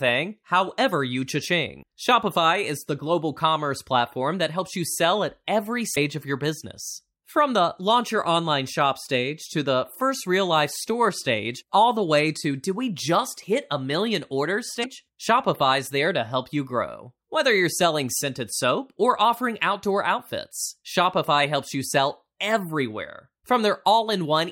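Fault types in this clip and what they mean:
Damaged data in a compressed stream: corrupted bytes make the decoder misread frames and lose sync until it finds the next valid header. Three occur, each about 50 ms long: 1.79 to 1.84 s after "however you", 5.92 to 5.97 s before "of your business", and 14.80 to 14.86 s after "hit a million orders". A plain dropout would leave a clean gap instead.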